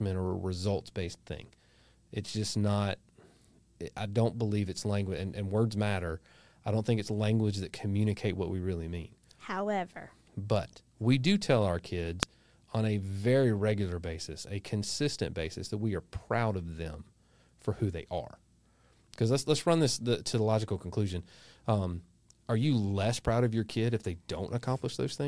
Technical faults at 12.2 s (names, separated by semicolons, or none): file header played as audio